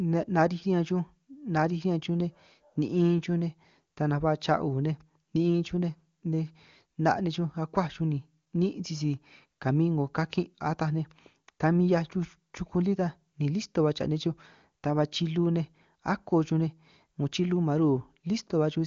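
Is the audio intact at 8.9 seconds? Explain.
Yes, the speech at 8.9 seconds is intact, with nothing dropped, clipped or distorted there, and the AMR wideband (HD Voice) coding at 23.85 kbit/s leaves at most faint traces.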